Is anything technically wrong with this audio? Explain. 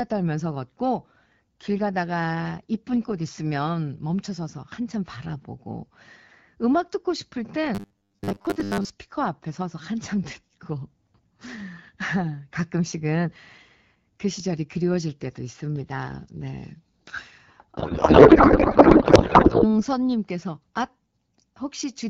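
Yes, there are two faults in this speech clip.

From 7.75 to 8.90 s the speech turns into a rigid, metallic buzz at about 100 Hz that still loosely tracks the syllables. This is robotic sound from repeated short buffers. Fresh audio likely stopped arriving on time, and the receiver covered the gap by replaying the last 10 ms of audio over and over, skipping most of the real signal. That fixed 10 ms repeat period imposes the 100 Hz pitch.

From 17.77 to 19.81 s the speech dissolves into garbled noise and warble that barely follows the talker. This is a codec payload misread. The sender packed the AMR-WB bits in octet-aligned form, but the receiver parsed them as bandwidth-efficient. The decoder therefore pulled parameters from the wrong bit positions and synthesised nonsense from frames that looked valid. The AMR-WB coding itself, at what sounds like 12.65 kbit/s, leaves only light damage outside this span.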